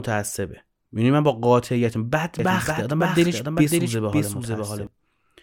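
A second capture path, or an edit holding two copies out of step, has likely mixed the speech in twice. From 2.39 s to 4.87 s, a doubled audio track trails the original by about half a second, about 5 dB quieter, dry and full-band, starting and stopping abruptly.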